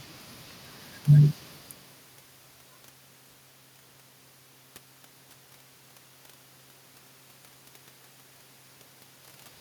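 A speech recording with two short bursts of loose connector crackle, the first from 0.39 to 0.52 s and the second from 3.89 to 3.97 s, each under an eighth of a second. You get that irregular scratchy crackle when a worn or grubby contact, probably a cable or jack shifting, keeps making and breaking, chopping the signal and popping on any DC present. The room noise and the level shifts around 1.5 s and 9 s come from the room and the talker moving.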